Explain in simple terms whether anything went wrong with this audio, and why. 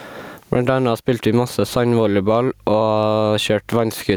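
Gain pumping runs through the whole recording. The swings are large, and loud and quiet moments end up squashed close together. The likely cause is a microphone level set far too high, with an automatic limiter quickly turning the sound down on every loud syllable and back up in the gaps.

Mains hum appears from 1.64 to 3.71 s, starting just after "anna spilte vi masse". It is a steady, low buzz at 50 Hz, fainter than the speech. It comes from the electricity supply leaking into the audio signal, typically through a ground loop between connected equipment or from a nearby transformer, and it stops once that section ends.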